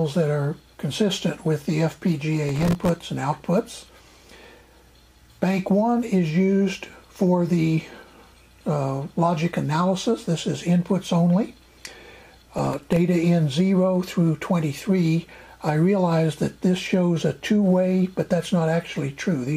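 From 2.49 to 2.96 s, and again from 12.58 to 12.96 s, a processor overload crackle tears through the sound. Tiny buffers of about 1.5 ms miss their deadlines in quick succession. Each miss drops to silence with hard edges. Together they make a gritty burst.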